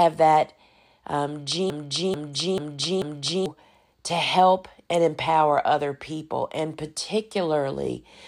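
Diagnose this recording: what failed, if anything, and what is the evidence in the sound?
A broken-record loop runs from 1.7 s to 3.46 s in this speech, between "that um" and "to help and empower". A fragment about 0.44 s long plays four times back to back, identical each time, and whatever should have filled that span is gone. On a spectrogram it shows as the same block of energy stamped at 0.44 s intervals; the waveform repeats sample for sample. The likely cause is a stalled player or stream buffer re-sending its last held fragment.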